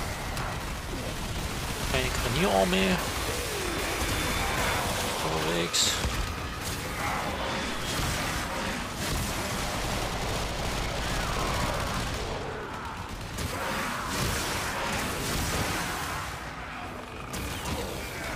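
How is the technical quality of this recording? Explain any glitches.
No glitches or technical faults can be heard here.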